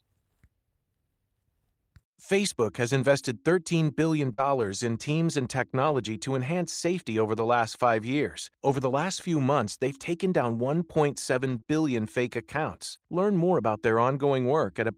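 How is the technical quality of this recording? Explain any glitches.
The recording has audible glitches. Between 3.21 and 13.03 s, about four scattered short gaps cause brief ticks and smears, from lost or late packets patched by extending the preceding sound.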